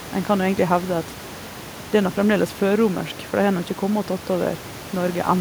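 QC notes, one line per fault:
No faults heard in this clip.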